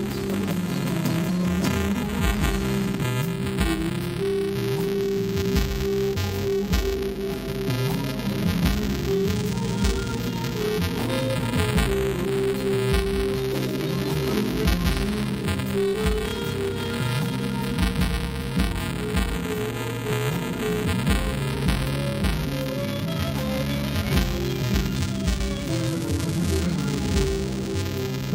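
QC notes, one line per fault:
Throughout, buffer tearing: a steady robotic buzz at 375 Hz rides on the sound and vanishes in silence. Writer and hardware read pointers have slipped, so a small slice of each period replays audio from a lap earlier, with hard joins, which fits a 128-sample buffer.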